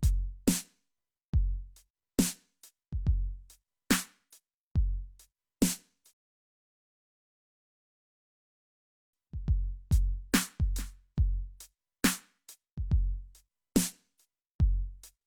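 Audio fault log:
6.13 to 9.13 s, rebuffering stall: the music drops to silence for 3 s and then picks up exactly where it stopped. The player had run out of downloaded audio and waited for more. Nothing is skipped. The gap only adds time.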